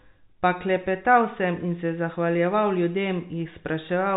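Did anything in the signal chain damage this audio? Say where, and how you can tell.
No, nothing stood out on listening: the speech carries the narrow band of G.711 telephone coding, with nothing above 3.8 kHz, which is simply that format at work.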